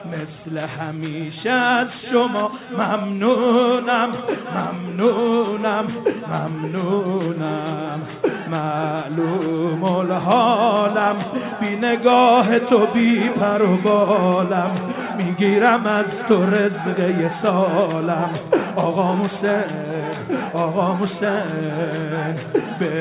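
Nothing stood out on listening, with the audio carried through a WebRTC call path whose G.711 A-law coding leaves no content above 4 kHz.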